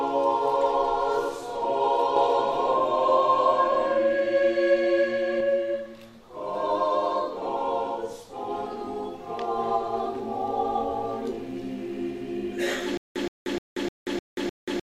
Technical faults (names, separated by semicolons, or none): doubled audio track; stutter with silent gaps